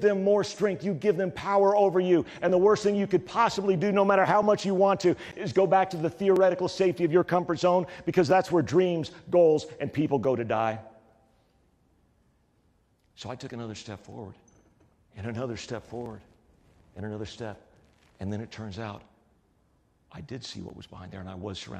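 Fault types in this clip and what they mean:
Clock drift buffer slips: clicks recur every 1.94 s, likely as two device clocks disagree and sample blocks drop or repeat; waveform shows periodic jumps, spectrogram evenly spaced vertical lines.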